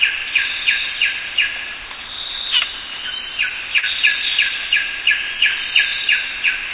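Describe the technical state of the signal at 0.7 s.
At 0.7 s the sound is intact, with nothing above 4 kHz, as expected from a call path whose narrow band fits G.711 mu-law coding at 64 kbps.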